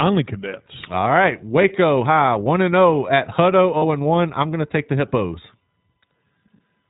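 The iLBC codec runs throughout the speech. Everything above 4 kHz is gone, and the roughened, synthetic quality is plainly audible. Each frame's excitation is coded on its own, and the framing fits iLBC's 20 ms mode at 15.2 kbps.

Lost iLBC frames occur at 1.62 s, a gap of about 20 ms, and from 3.78 to 3.83 s, about 40 ms, just before "and one I'm going". In each gap the decoder fills missing packets by repeating the last pitch cycle mixed with noise, heard as a held buzzy or breathy vowel. The speech recovers almost immediately because the frames stand alone.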